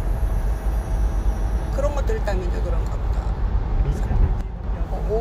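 A clip of everyday sounds in which one channel drops out, likely from a stereo channel briefly losing its signal, from 4.41 to 4.64 s. Once folded to mono, shared content falls abruptly by about 6 dB and anything carried only in that channel vanishes.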